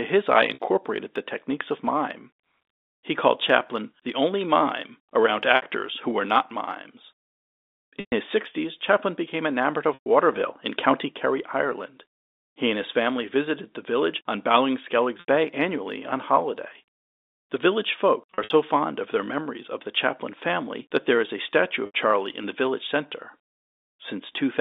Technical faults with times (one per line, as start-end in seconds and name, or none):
0.54-0.60 packet loss with pitch repetition
5.56-5.62 packet loss with pitch repetition
8.00-8.12 packet loss with pitch repetition
9.94-10.05 packet loss with pitch repetition
15.20-15.26 packet loss with pitch repetition
18.34-18.50 packet loss with pitch repetition
21.86-21.94 packet loss with pitch repetition